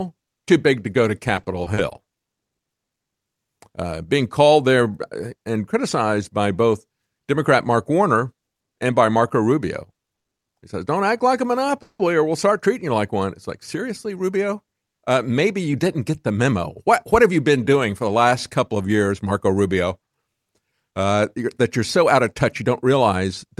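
From 1.35 to 2.60 s the speech turns choppy and robotic, the mark of repeated packet loss. Seven holes fall in quick succession, none longer than 30 ms. Each is patched by extending the preceding sound, about 130 ms of patching in all, covering roughly a tenth of the stretch. Around 80 ms of the original is gone for good. That missing material is what sets this apart from the stalls later on, which lose nothing.

At 10.15 s a short stall from a late packet holds the current sound for 90 ms. The receiver's buffer emptied, the last fragment was stretched until the packet turned up, and playback then resumed exactly where it left off. Nothing is skipped, so what you hear is one sound lingering too long rather than a piece dropping out.

Straight after, from 10.26 to 10.40 s, the audio goes silent for 120 ms before continuing intact. This is a call audio freeze, likely from packets held up in transit, adding 120 ms of delay on top of the stall.

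A second freeze comes at 11.82–12.01 s, between "act like a" and "or we'll start treating". Here the last sound is carried on and fades, ending in 70 ms of silence within a 170 ms pause, likely caused by another delivery hold-up. Again nothing is missing. It differs from the 10.15 s stall in its length and its silent tail.

A jitter buffer speed-up runs from 15.13 to 17.30 s, ending just before "you been doing for". A backlog of buffered audio was drained by trimming short pitch-period slices, around 150 ms in total, so the speech plays at 107% speed and sounds hurried. Another follows at 21.96–23.57 s, after "that you're", at 106% with about 100 ms removed. In both, the pitch stays unchanged, which distinguishes this from a sample-rate error that would raise the pitch along with the speed.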